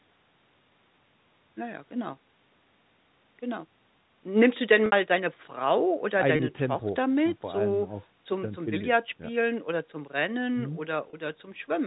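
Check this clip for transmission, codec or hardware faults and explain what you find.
The clip has one kind of fault, heard three times, all riding on the band-limited G.711 telephone sound. Packet loss with pitch repetition occurs at 4.86 to 4.92 s (60 ms, consistent with two lost packets), 6.36 to 6.39 s and 11.10 to 11.13 s (30 ms each). The receiver loops the last pitch period to fill each gap, so the sound briefly holds as a slightly buzzy, frozen tone.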